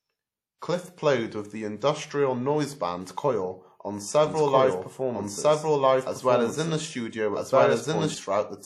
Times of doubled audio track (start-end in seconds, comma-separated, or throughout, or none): 4.26-8.14